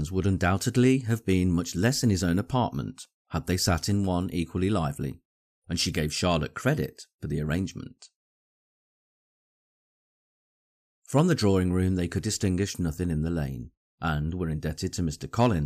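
A brief crackle sits on a peak near the very end, from 15.41 to 15.46 s. It is hard clipping: the level overran what a stage could pass by about 3 dB, so the waveform tops were cut flat, adding harsh high harmonics.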